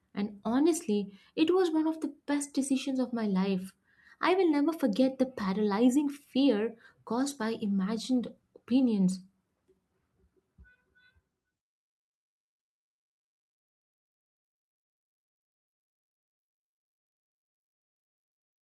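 A call bitrate drop hits this speech from 7.15 to 10.25 s, right after "forget the paralyzing fear". The bandwidth estimate fell and the encoder coded far more coarsely, which fits a cut from about 64 to 22 kbps. For 1.28 s at the lowest rate, the speech sounds rough and muffled, with its high frequencies cut off.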